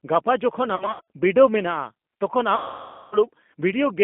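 Throughout, the speech carries G.729 codec coloration: band-limited to 200 Hz–3.5 kHz, rough and synthetic, consistent with 8 kbit/s pulse-coded reconstruction. From 0.76 to 1.01 s, after "ᱜᱟᱯᱟ ᱡᱚᱠᱷᱚᱱ", VoIP packet loss concealed by the speech codec produces scattered buzzy or noisy, smeared stretches (longest about 80 ms) as the decoder extrapolates. At 2.56–3.19 s, after "ᱵᱤᱰᱟᱹᱣ ᱢᱮᱱᱟᱜᱼᱟ ᱛᱚᱠᱷᱚᱱ", a longer loss of about 560 ms decays into a fading tone or noise.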